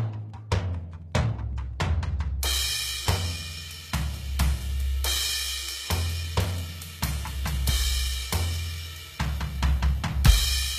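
From 0.0 to 2.0 s there's Wi-Fi interference: a nearby radio's beacon, repeating every 102.4 ms, gets rectified by the audio circuit, so you hear steady ticking about ten times a second, sitting roughly 40 dB under the music.

Across the whole clip the codec damage is plainly audible. The treble is rebuilt rather than real, with harmonics that don't line up, and nothing above 14.9 kHz. That's likely HE-AAC compression filling the top from copied lower bands, consistent with a very low bitrate around 20 kbps.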